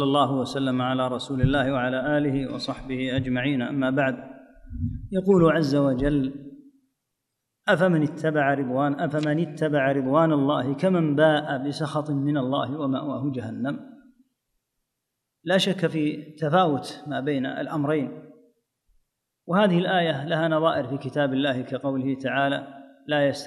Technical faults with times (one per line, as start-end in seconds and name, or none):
none